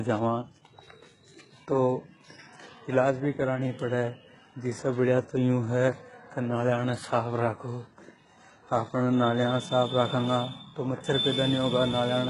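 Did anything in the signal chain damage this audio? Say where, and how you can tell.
Yes, at the codec stage, throughout the speech. Nothing reaches above 11 kHz. The s sounds come out gritty and metallic, and the damage is heavy. This is likely HE-AAC compression at a very low bitrate, near 12 kbps, rebuilding the treble from copied lower bands.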